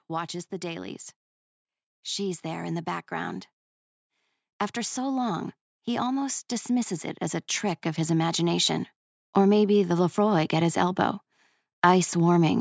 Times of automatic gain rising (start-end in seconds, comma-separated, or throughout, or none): 7.63-10.03